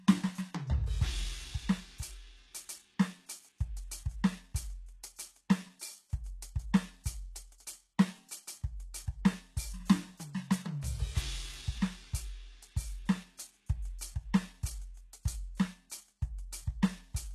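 Music, with HE-AAC compression damage plainly audible throughout: gritty, metallic treble that stops at 12.3 kHz, likely band replication at a very low bitrate, consistent with about 16 kbps.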